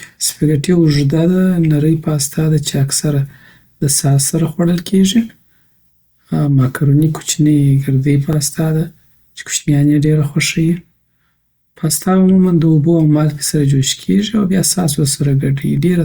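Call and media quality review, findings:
Overlapping chunks, speech. Short stutter/click at 3.31 s (after "پاستا ده چې اکثره", before "د ساس سره خوړل"), 8.33 s (before "ده چی کوشنیان"), 13.35 s (after "عموماً د اوبو او"). Regular 5 s spacing. Each join replays 20 ms of audio. Probable component: chunked processing or streaming stage. Each 5 s chunk begins before the previous ends, so the tail is heard twice.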